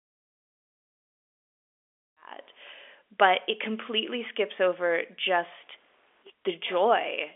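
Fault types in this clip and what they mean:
No technical faults present.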